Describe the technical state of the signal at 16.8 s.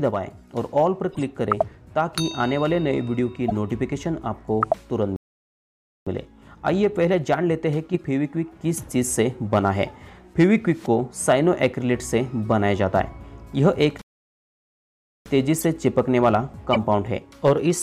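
A corrupt frame decoded runs from 16.73 to 16.77 s, ending just before 16.8 s. Damaged bits in about two frames misplace energy, giving a loud glitch peaking around -5 dBFS, heard as a chirp, squeak, blip or burst of noise.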